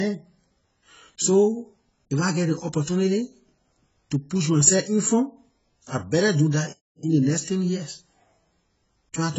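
The speech sounds dull throughout, with nothing above 7.7 kHz, even though the file is a high-bitrate MP3. This is likely low-bitrate audio saved at a high bitrate: the narrow band and coding artefacts point to an earlier, heavily compressed encoding that re-encoding cannot restore.

From 6.73 to 7.03 s the sound cuts to silence for about 0.31 s, then resumes with "in ley next ten". This playback stall likely came from the player running short of data or being blocked, so the output went silent until it recovered.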